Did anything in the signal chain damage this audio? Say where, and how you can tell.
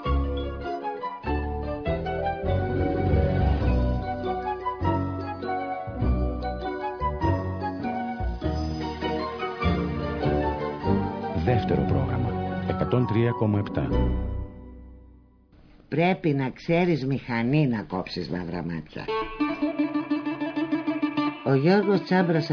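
No, nothing in the signal chain stood out as having damaged this audio when I listened to it.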